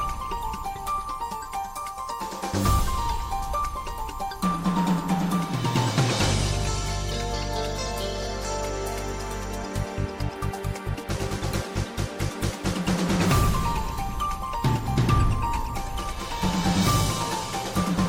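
There are no technical faults to describe in this audio.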